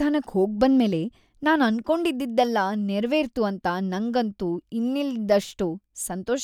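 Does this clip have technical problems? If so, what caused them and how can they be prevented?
Yes. There is one sharp click at 2.22 s, right after "ಹೋಗ್ಬಂದ್ಮೇಲೆ ನಾನ್". It is a case of dropped samples. Only a couple of samples are missing, a tiny fraction of a millisecond. No sound is lost, but the waveform jumps to a later value. That jump makes the click and a thin vertical line in the spectrum. The likely cause is a brief buffer glitch during recording or transfer. Larger buffers and a steady clock help prevent it.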